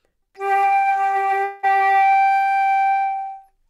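From 1.43 to 1.65 s the sound breaks off and a fading buzz fills the gap, with no silence. This is a long network dropout. About 200 ms of audio was likely never received, and the concealed stretch resumes without it.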